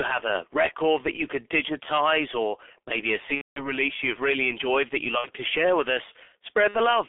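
Throughout, the speech is muffled and hoarse, confined to roughly 300 Hz to 3.5 kHz, with smeared consonants and a rough, gritty texture. This is heavy G.723.1 codec damage: a narrowband telephony coder running at about 6.3 kbit/s models the voice in coarse 30 ms frames and updates that model slowly, so fine detail and fast transitions are lost.

From 3.35 to 3.71 s, between "digitize or maybe a" and "you've really enjoyed that", the sound stretches out and fades, then mutes, and the voice stays weak or distorted for a moment after normal sound resumes. Shorter versions follow at 5.18 to 5.28 s, between "really enjoyed that you" and "to share with", and at 6.68 to 6.77 s. This is VoIP packet loss concealed by the speech codec. About 210 ms went missing in the first gap, which fits roughly seven lost frames, and about 60 ms in each of the others. The decoder filled the gaps by extending its last pitch and filter with falling gain.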